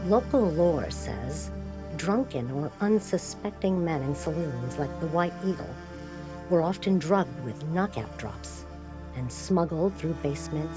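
No technical faults can be heard anywhere in this audio.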